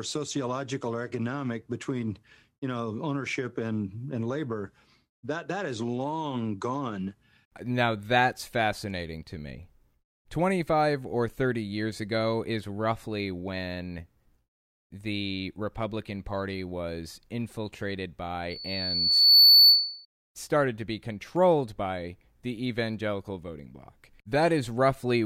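From 18.50 to 20.05 s, after "was infiltrated", a loudspeaker feedback squeal builds: the loop gain exceeds one at 4.5 kHz, so that tone swells over about a second to roughly 15 dB above the speech. A spectrogram shows one brightening horizontal line; the waveform envelope balloons.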